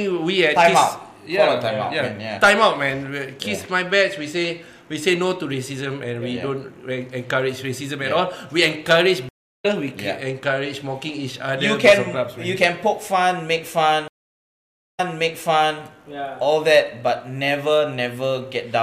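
Two stream reconnect faults break the audio. At 9.29 s the sound drops out for 325 ms and resumes roughly a third of a second further on, so a short stretch is skipped. At 14.08 s an 877 ms silence is followed by playback restarting 836 ms earlier, so material is heard twice. Each time the connection dropped and a fresh decoder started mid-stream, with a brief muted or faded first frame. A waveform or spectrogram shows flat, empty gaps with abrupt content discontinuities at their edges.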